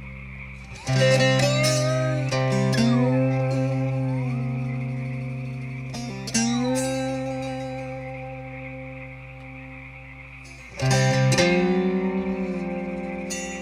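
Nothing is technically wrong with this clip.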